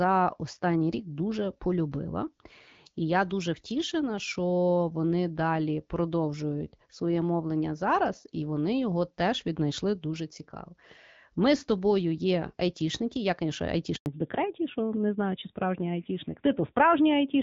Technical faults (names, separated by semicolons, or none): handover gap; fallback to narrowband